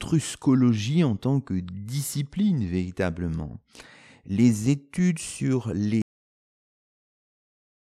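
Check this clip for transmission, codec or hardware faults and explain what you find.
One fault is present: a cut-off end. At 6.02 s, right after "les études sur", the speech stops mid-sound and the remaining time to the end is pure digital silence. The final stretch of audio was never written out or played, so nothing decays away. On a waveform the signal ends in a vertical wall at full activity followed by a flat line; a spectrogram shows energy across all bands vanishing at once, then blank.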